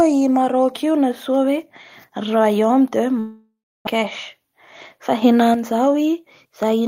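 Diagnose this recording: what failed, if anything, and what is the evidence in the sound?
A long network dropout likely hit at 3.19 s. The last sound smears into a fading buzz, leaving about 0.3 s of silence before audio resumes at 3.89 s with roughly 0.4 s missing. A spectrogram shows smeared, decaying harmonics, then an empty gap.

A sudden gain jump at 5.22 s lifts speech and background noise together by about 6 dB until 5.54 s. It most likely comes from a digital gain change in call processing applied without a ramp. The waveform envelope steps abruptly at both edges, and the noise floor shifts with it.

A jitter buffer speed-up runs from 5.71 s to 6.81 s. The receiver removes short pitch-period slices, trimming roughly 70 ms, so the speech plays at about 106% speed at unchanged pitch and sounds hurried. Harmonic spacing holds steady while syllables compress in time.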